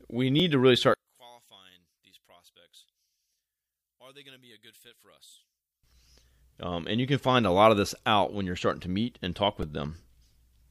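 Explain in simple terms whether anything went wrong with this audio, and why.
Two kinds of fault can be heard. The first is a repeated buffer. At 0.40 s, and again at 9.63 s, the device ran short of new audio and replayed its last tiny piece, about 1.5 ms long. It plays once extra at 0.40 s and four times extra at 9.63 s. These are too short to stutter, so they come across as a click or a very brief buzz.

The second runs from 0.94 s to 5.84 s. The speech suddenly drops to almost nothing, leaving only a faint trace. The likely cause is one channel inverted: one side was flipped upside down, so when both sides are combined, the shared speech cancels itself out.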